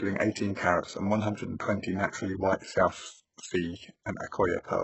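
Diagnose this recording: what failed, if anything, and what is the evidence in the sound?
The failure is at the codec stage, with damage heard across the whole speech clip: sibilants turn gritty and lispy, and the top end sounds bright but synthetic. That points to HE-AAC compression, likely at a very low bitrate, around 8 kbps. The treble is rebuilt by copying lower bands upward instead of coding it, so the harmonics above the crossover don't line up. A spectrogram would show smeared, repeated-looking patches in the upper band and nothing above 8 kHz.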